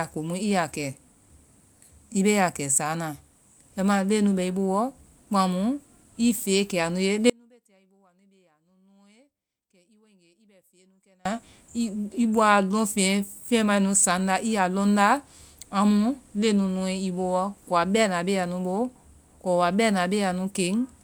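At 7.30 s the speech cuts out abruptly, leaving a faint residue about 35 dB down until 11.25 s. This audio dropout to a faint residue likely reflects the source being lost while the path stayed live. The waveform shrinks to a thin band, and the spectrogram goes nearly dark between sharp edges.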